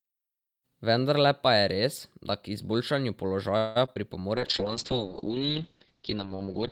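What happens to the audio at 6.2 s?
At 6.2 s the speech sounds muffled and rough, with a watery, smeared quality. This is a call bitrate drop running from 4.36 s to the end of the clip. The encoder's rate falls from 32 to 7 kbps, so it codes coarsely and cuts the audio band from 20 kHz to 8 kHz.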